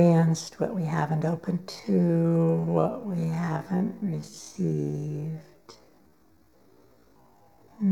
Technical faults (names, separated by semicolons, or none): channel delay (comb filtering); time-stretched section